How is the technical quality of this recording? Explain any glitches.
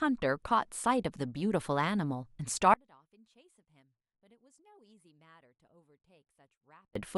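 The speech drops almost to silence partway through. From 2.74 to 6.95 s the level falls by about 35 dB, likely because one channel is inverted and cancels on mono summing. The waveform collapses to a thin trace; the spectrogram goes nearly blank.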